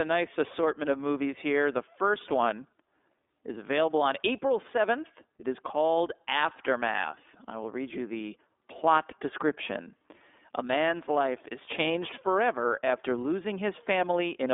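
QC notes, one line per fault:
Throughout, iLBC codec: nothing above 3.7 kHz, and the speech is plainly rough and synthetic, which fits independently coded 30 ms frames at around 13.3 kbps.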